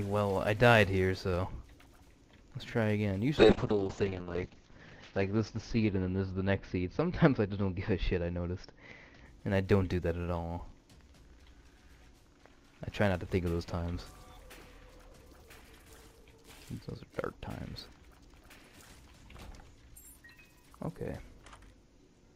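From 3.41 s to 9.31 s the sound turns muffled and rough, with the top end cut to about 8 kHz from 20 kHz and the worst coarseness lasting about 1.07 s. This call bitrate drop fits the encoder falling from roughly 64 kbps to 6 kbps.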